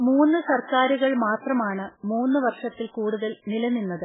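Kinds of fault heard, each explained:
MP3 compression: heavy damage throughout, likely a low-bitrate MP3 near 8 kbps; spectrogram shows nothing above 3.8 kHz, with flickering, patchy bins below.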